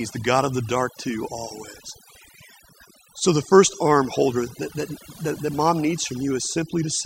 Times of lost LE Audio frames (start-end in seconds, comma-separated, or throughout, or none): none